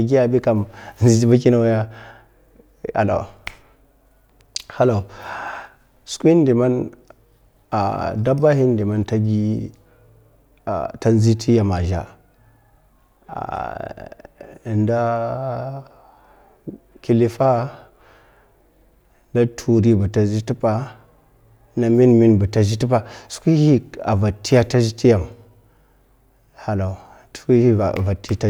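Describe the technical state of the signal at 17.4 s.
At 17.4 s the signal is intact, with no audible fault at that moment.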